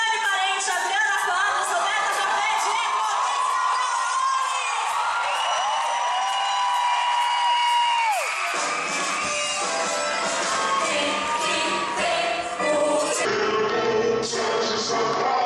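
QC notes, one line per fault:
13.25–15.46 s, wrong sample rate: sound slows to two-thirds speed and drops 7 semitones at once, fitting 48 kHz audio played at 32 kHz; pitch-shifting keeps timing.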